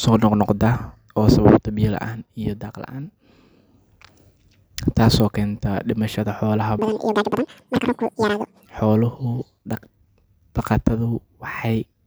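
From 6.79 s to 8.66 s, the audio is read two samples at a time, at double speed. The reader treats each pair of samples as a single frame. That fits a stream taken as stereo, or as samples twice as wide. Each stretch of speech plays in half its proper time. Pitch jumps 12 semitones, a full octave up. Normal playback resumes after 8.66 s.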